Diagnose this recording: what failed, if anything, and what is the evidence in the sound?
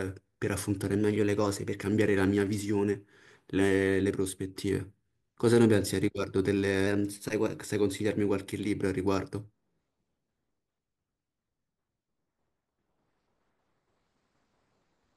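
The likely cause is a drift correction step at the driver or buffer stage, where clock-matching software twice jumped the playback rate to rebalance its buffer. From 0.98 to 1.79 s and again from 6.87 to 7.54 s, the speech runs about 6% fast and its pitch rises by roughly a semitone (102 cents), with speed and pitch moving together. Each time, it snaps abruptly back to normal rate and pitch.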